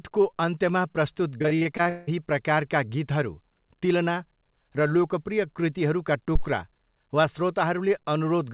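From 1.38 to 2.12 s, repeated packet loss (robotic sound) chops the speech: eight gaps, the longest 176 ms, are patched by extending prior audio, concealing about half the span.

At 6.35 to 6.47 s, a phantom power thump appears: a supply step through the coupling capacitors gives a deep low-frequency knock decaying within 27 ms. Throughout, nothing above 4 kHz passes, consistent with a G.711 A-law call path.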